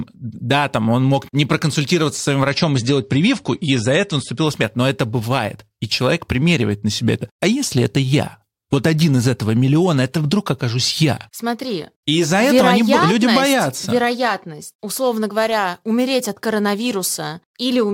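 From 2.48 to 4.48 s, just after "не проконсультироваться с своим", the speech abruptly dulls, nothing above 10.5 kHz, with sharper codec artefacts and no gap: an adaptive stream at a lower bitrate, which fits a drop to about 41 kbit/s.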